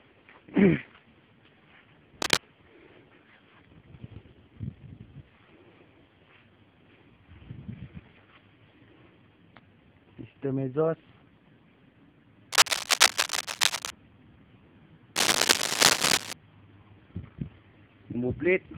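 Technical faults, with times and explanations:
2.22–2.40 s, 12.52–13.90 s, 15.16–16.33 s: cable scratch noise. Dense, uneven bursts of scratching sit above the sound, the last one louder still. A worn cable or connector being moved is the likely cause, its contact resistance changing rapidly.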